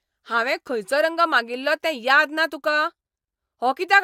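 No technical faults can be heard anywhere in the speech recording. Nothing in it calls for a timed entry.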